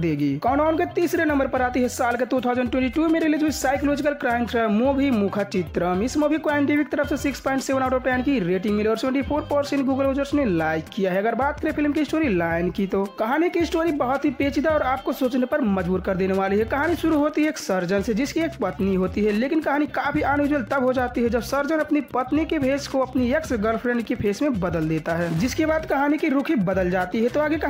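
From 16.46 s to the end of the clip at 27.70 s, a steady ticking runs underneath the sound, well below it at around 30 dB down. This is Wi-Fi interference: a nearby Wi-Fi radio's beacon, sent every 102.4 ms, is rectified by the audio circuitry, producing just under ten clicks a second. The slow, even tick rate separates it from mobile-phone interference, whose pulses come fast enough to sound like a buzz.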